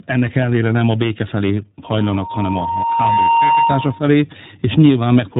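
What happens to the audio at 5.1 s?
At 5.1 s the speech carries tandem speech coding, a fault present across the whole clip rather than a local event. The signal passes through CVSD at 64 kbit/s, then G.711 A-law, then iLBC at 13.33 kbit/s, so two speech coders each re-encode the previous one's degraded output. The result sounds rough, muffled and warbly, with nothing above about 3.8 kHz.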